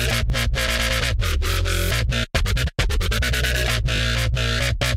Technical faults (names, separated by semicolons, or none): repeated buffer